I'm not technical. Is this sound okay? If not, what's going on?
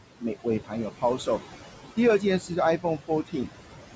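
No. A noise suppressor was cleaning up this speech, and it did so too aggressively.

The first problem is noise suppressor artifacts, present throughout. The suppressor keeps judging which parts of the sound are steady background hiss and turning those parts down, moment by moment. Here it pulls the room noise down hard. That noise, already much quieter than the voice, now dips away in the gaps and comes back underneath the speech. The voice can come across a little thin.

The second problem is speech cut by the noise suppressor, at three spots: 0.44 to 0.73 seconds, 0.9 to 1.4 seconds, and 2.78 to 3.49 seconds. In each, the suppressor mistook bits of the voice for background noise and turned them down along with it. The affected parts are brief, adding up to about a tenth of a second in each of the first two spots and roughly a fifth of a second in the last. Those bits of speech sound swallowed or faint, as if the ends or soft edges of sounds were clipped away.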